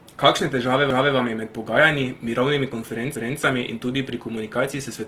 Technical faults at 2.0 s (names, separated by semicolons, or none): Opus compression